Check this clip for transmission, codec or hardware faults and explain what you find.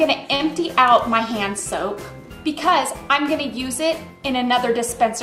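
One transmission fault: a short stall from a late packet at 0.35–0.42 s. The jitter buffer ran dry, so the sound was stretched about 43 ms and then resumed, held too long with a slight buzz or dip.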